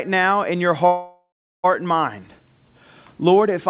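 At 0.86 s the speech stalls in a call audio freeze lasting until 1.66 s. The last sound is stretched into a fading buzz for roughly 0.4 s, then about 390 ms of silence follows before the speech resumes from exactly where it stopped, with nothing lost, so everything after runs about 0.78 s late. The likely cause is packets held up in transit, emptying the jitter buffer of this narrowband call path, which carries nothing above 4 kHz.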